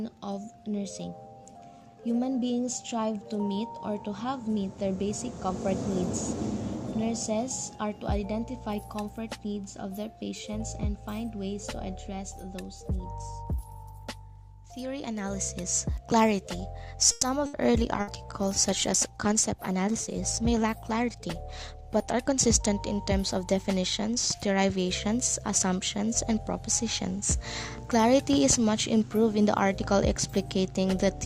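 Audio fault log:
17.11 to 17.25 s, call audio freeze: The sound stops moving forward for about 110 ms. The last sound is stretched into a short fading buzz or hiss instead of silence. When playback resumes, it picks up exactly where it stopped, and nothing is lost. The likely cause is packets held up in transit, which left the jitter buffer empty. The receiver filled the wait with a continuation of what it had last played. The result is an added pause, not a cut.
17.46 to 17.56 s, skip ahead: Playback jumps forward abruptly. Roughly a tenth of a second of audio is gone, and about 70 ms of filler bridges the join. Later audio was already queued when a stretch was discarded, either lost on the way or dropped from an overfull jitter buffer. The two sides meet almost directly. This trims some of the delay added by the freeze just before it.
17.73 to 22.28 s, call bitrate drop: The sound turns coarse and muffled for about 4.5 seconds. 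The encoder was pushed from 96 kbps down to 27 kbps and stayed at that floor for almost the whole stretch. The call's bandwidth estimate had fallen. With far fewer bits, Opus codes the signal more roughly and trims the upper frequencies. That gives the dull, watery texture, which holds until the rate climbs back.
18.01 to 18.10 s, burst of packet loss: A brief gap occurs inside the low-bitrate stretch. About 60 ms of audio is missing, and 60 ms of concealment covers it. The receiver kept extending the last sound and lowered its level as the gap went on, so it comes across as a short fading buzz or hiss. The audio then continues past the lost portion, and the content in between is absent.
19.26 to 20.48 s, jitter buffer speed-up: For about 1.2 seconds the sound runs at roughly 107 percent of normal speed, while the pitch stays the same. It feels slightly rushed. The jitter buffer was holding more audio than its target. 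To shed that delay, the receiver cut many tiny pieces of one or a few pitch periods each. Altogether roughly a tenth of a second was removed.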